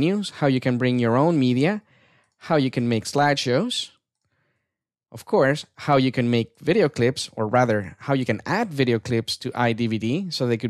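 No technical faults can be heard anywhere in the audio.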